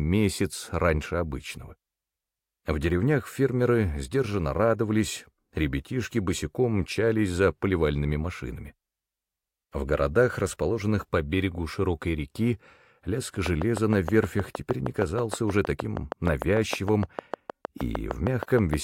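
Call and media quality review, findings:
Train of clicks, 13.46 to 18.75 s. Regular ticking, about 6.5 per second, around forty clicks, roughly 15 dB above the sound. Likely nearby equipment interference or a faulty connection or power supply.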